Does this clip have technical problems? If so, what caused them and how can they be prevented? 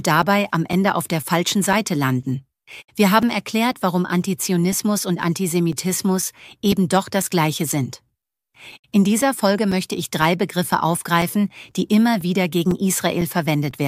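Yes. There are periodic USB or driver dropouts running from about 0.22 s to 13.71 s. Every 0.5 s a few milliseconds of audio drop out to silence, so you get a steady tick or pop, around thirty of them. That even spacing suggests a background task stalling the USB bus or the audio driver on a timer. To prevent it, find and disable the polling process, or move the interface to its own USB controller.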